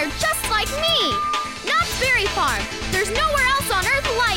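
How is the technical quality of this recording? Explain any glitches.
The recording has one clear fault, a loudspeaker feedback squeal from 0.57 to 1.77 s. A microphone re-amplifies its own loudspeaker until a 1.2 kHz tone runs away, swelling over roughly half a second to match the sound's loudness. That self-building rise sets it apart from a steady interfering tone.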